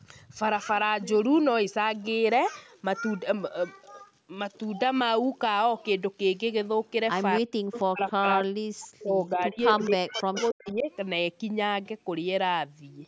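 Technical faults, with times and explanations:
7.39–7.56 s and 7.91–10.9 s, speech suppressed in double talk: the voice drops by as much as about 40 dB, likely because the echo canceller could not separate its own talker from the loudspeaker echo and turned both down.
7.72–7.84 s, 8.02–8.12 s, 9.69–9.86 s and 10.54–10.74 s, echo leak: a copy of the voice returns 281 ms late, at roughly 10 to 25 dB below the speech, likely loudspeaker pickup the canceller missed.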